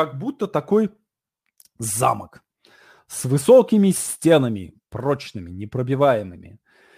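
Throughout the speech, sample clock jitter is audible: the converter's timing wanders by a few microseconds, so steep, bright passages pick up a gritty hiss about 30 dB below the signal that vanishes in pauses. A spectrogram shows broadband haze tracking loud, high-frequency moments.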